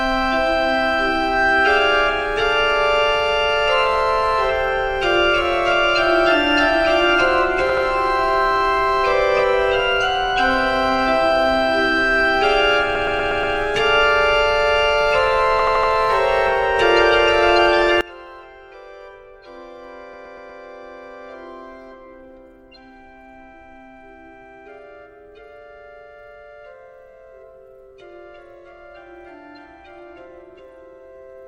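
At 7.69 s the sound stutters. An 80 ms block plays twice more, adding 160 ms, which points to a short run of compressed frames being written again: repeated frames. On a waveform the same short shape sits side by side, and on a spectrogram an identical vertical slice repeats. The same fault recurs at 12.95 s (a 120 ms block heard five extra times, adding 600 ms) and at 15.59 s (80 ms, four extra times, adding 320 ms).

From 18.01 s to the end, the centre of the mix collapses by about 23 dB, leaving a faint residue. The likely cause is one channel inverted in polarity, so shared content cancels when the channels are summed. On the waveform the amplitude drops sharply at that point. On the spectrogram the low end and centred energy thin out, leaving only a weak residue. Within that stretch, at 20.13 s, a 120 ms block repeats four extra times, adding 480 ms, seen as repeated low-level slices.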